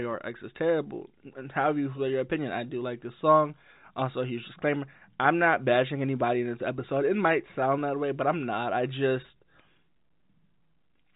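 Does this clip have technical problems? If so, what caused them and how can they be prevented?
No, there are no technical problems in this clip.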